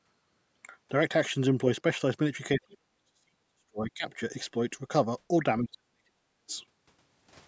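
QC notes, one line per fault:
2.56 to 4.06 s: speech suppressed in double talk, level plunges by roughly 40 dB for about 1.5 s; waveform collapses, spectrogram thins to near-silence, likely echo canceller gating during overlap.
5.6 to 6.5 s: speech suppressed in double talk, about 0.7 s of the span dropped by roughly 40 dB; waveform shows gaps, spectrogram shows broken, faded bands, likely the same double-talk gating.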